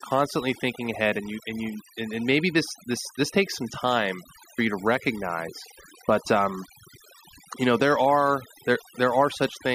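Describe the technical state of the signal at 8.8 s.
Timecode bleed runs through 8.8 s, as it does across the whole clip. Linear timecode at 24 frames per second is leaking in from an adjacent track or cable, its square wave flipping between roughly 1 and 2 kHz, heard as a thin chirping warble sitting around 30 dB under the speech.

Overdone noise removal is also present at 8.8 s and throughout. An over-aggressive noise reducer is shutting down individual frequency bands whenever they approach its noise estimate, taking the speech's quieter components with them, so the background drops and breaks up into twinkling specks.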